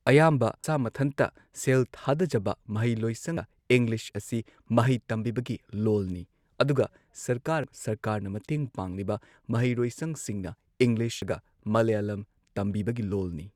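Brief chirps or squawks break into the speech at 0.64, 3.37, 7.64 and 11.22 s. These come from damaged data in a compressed stream: corrupted bytes make the decoder misread frames, lose sync and search for the next valid frame header.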